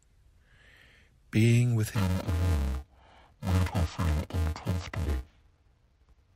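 Interleaved audio read as planar begins at 1.95 s and runs to the end. Each 2.67 ms block of alternating left-right samples is split into halves, each played at half speed, so the speech turns dull and robotic with a 375 Hz buzz and no clear octave drop.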